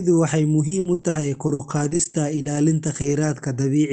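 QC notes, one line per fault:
0.67 to 3.27 s, repeated packet loss (robotic sound): fifteen short holes, the longest 60 ms, each patched by stretching the last bit of sound. Roughly half a second, a fifth of that span, is rebuilt, hence the choppy texture, all within an 8 kHz call band.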